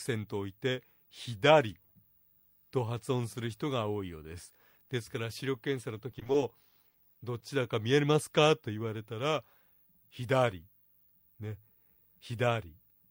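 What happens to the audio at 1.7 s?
Nothing goes wrong at 1.7 s; the audio plays through that moment intact, with no dropout, click or other fault.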